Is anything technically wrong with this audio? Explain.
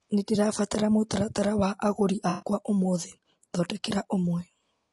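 Yes, there are two faults. Throughout the speech there is plainly audible compression damage, most likely from low-delay AAC compression (AAC-ELD). Its short analysis frames separate the pitch harmonics of a voice poorly and spend bits inefficiently, and the degree of damage here fits a bitrate around 32 kbps. The result is a rough, grainy voice with noise filling the gaps between harmonics and a thin, synthetic-sounding upper band.

From 2.29 to 2.48 s there is AAC frame loss with concealment. About 120 ms of coded audio never reached the decoder, so it filled the gap by extrapolating from the last good spectrum rather than playing silence. That reconstruction only approximates the missing signal, so this short stretch is heard as a smeared, noisy, phasey patch that briefly blurs the speech before normal decoding resumes.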